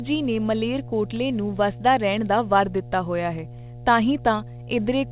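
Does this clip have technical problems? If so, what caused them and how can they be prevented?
Yes. Mains hum runs through the whole clip as a steady 60 Hz tone with low harmonics, sitting roughly 15 dB below the speech. A ground loop or a transformer near the cabling is coupling the power line into the signal path. The narrow top end, with nothing above 4 kHz, fits the G.711 call codec the audio passed through. To prevent the hum, break the ground loop with balanced connections, a ground-lift or isolation transformer, and keep audio cables away from power supplies.

Word clock ticks begin at about 0.15 s and continue to the end, arriving roughly every 0.2 s as short, sharp clicks of uneven strength. The receiving device on a digital link is running from its own clock rather than locking to the sender's. The two clocks differ by something like 100 ppm, so at each slip one sample is dropped or repeated, producing a tick at a steady rate. 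To prevent the ticks, set the receiving device to sync to the incoming digital signal or to a shared master clock.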